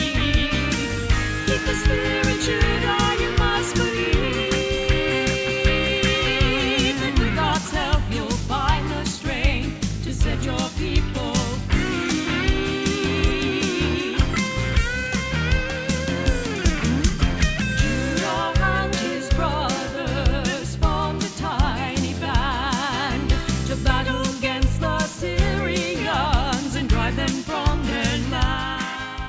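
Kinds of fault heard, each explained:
No audible faults detected.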